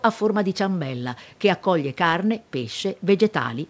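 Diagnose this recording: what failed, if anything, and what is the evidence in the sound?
Nothing failed: the speech is band-limited at 8 kHz, consistent with the call microphone processing and a wideband call codec working as intended, and no stage from capture through the network shows any sign of trouble.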